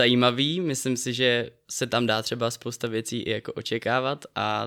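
No faults are audible anywhere in this speech recording.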